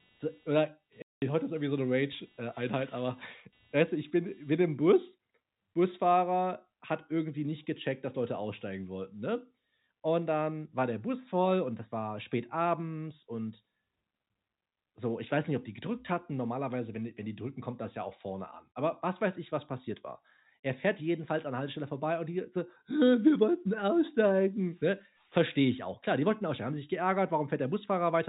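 From the start to 4.75 s there is computer activity noise: a scratchy buzz pulsing a few hundred times a second, well below the speech. Processor or peripheral load changes are disturbing the ground the audio circuit shares with the computer. Unlike steady mains hum, it has no fixed pitch and doesn't track the speech. It rises and falls with the machine's workload, then stops partway through the clip while the talker carries on.

Over that buzz, from 1.02 to 1.22 s, is packet loss filled with silence. A 200 ms hole opens in the speech, which fits ten lost 20 ms packets. The receiver played pure silence in their place, leaving a gap with hard edges. Concealment would instead smear, repeat or fade the surrounding sound across the gap. Around it, the narrow telephone band of the G.711 coding comes through as expected.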